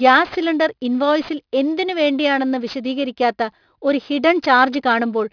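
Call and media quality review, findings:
Aliasing, throughout the speech. Gritty, metallic sibilants; spectrum runs hard up to a band edge near 5.5 kHz. Probable component: sample-rate converter, downsampling without an anti-alias filter, which fits a drop to 11 kHz. Energy above 5.5 kHz folds back below it as unrelated tones, around 25 dB under the speech. Fix: low-pass before decimation.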